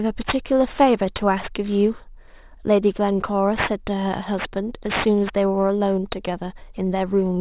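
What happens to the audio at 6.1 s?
At 6.1 s you're hearing aliasing, and it runs through the whole clip. The sound points to a drop to an 8 kHz rate with no filter, so energy above 4 kHz folds back down, sitting roughly 15 dB under the speech as gritty, metallic sibilants.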